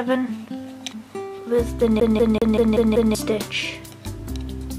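From 2.00 s to 3.15 s the audio sticks on one turn, the CD fault where a scratch knocks the laser back a track each rotation. A 192 ms slice repeats six times, each jump marked by a brief mute, giving a fast, regular stutter.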